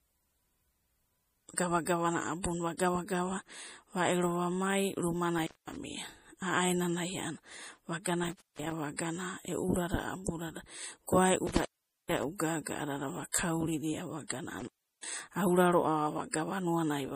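Across the whole clip the speech has a watery, swirly quality with metallic chirps on s sounds, and nothing is present above 15.3 kHz. The likely cause is MP3 compression at a low bitrate, which fits around 40 kbps. Short of bits, the encoder drops weak frequency lines that flicker on and off frame to frame and cuts the treble at a fixed point. On a spectrogram this shows as a hard ceiling at 15.3 kHz and speckled, patchy high-frequency energy.

At 1.85 s the first pre-echo appears: a 17 ms smear of hiss just before a sharp attack. Further instances follow at 8.96 to 8.99 s (23 ms), 12.38 to 12.40 s (20 ms), 13.32 to 13.34 s (23 ms), 14.28 to 14.30 s (27 ms) and 16.33 s (11 ms). Each time, quantisation noise sized for the loud attack spreads across its whole transform block, filling the quiet moment before the attack and softening it. A spectrogram shows a broadband noise smudge leading each onset, and the waveform shows low-level fuzz ahead of the transient.

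Intermittent contact occurs at 5.38 to 5.76 s (open about 210 ms), 8.24 to 8.72 s (about 228 ms), 11.47 to 12.24 s (about 444 ms, the longest) and 14.60 to 15.12 s (about 348 ms). A loose connection opens briefly, and the sound drops out or breaks up, with crackle at the edges and hiss while the line is open. The waveform shows the signal collapsing with spiky edges, and the spectrogram shows vertical clicks bracketing a near-empty gap.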